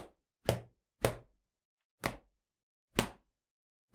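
No technical faults can be heard in this recording of sounds. Nothing in it calls for a timestamp or a fix.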